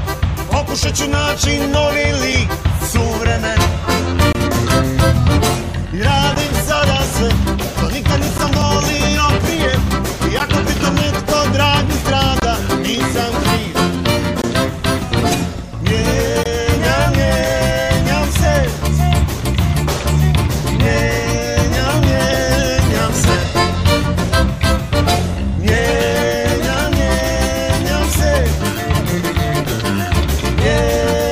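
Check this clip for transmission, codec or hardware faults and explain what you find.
There's one fault here: gaps between stream segments. Short silent holes with hard edges cut into the sound at 2.32 s, 4.33–4.35 s, 6.35 s, 8.38 s, 10.39 s, 12.40–12.42 s, 14.42–14.44 s and 16.43–16.46 s. They run from about 5 to 23 ms and land roughly every 2 seconds, which points to 2-second segments whose timestamps don't quite join, so the player pads the space with silence. Nothing is actually lost; the audio just gets pushed later.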